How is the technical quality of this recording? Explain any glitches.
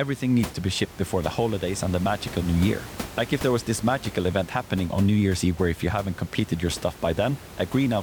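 Nothing here counts as a glitch, just a bit of room noise sitting about 16 dB under the speech, which is part of the space the microphone was in rather than anything the system did.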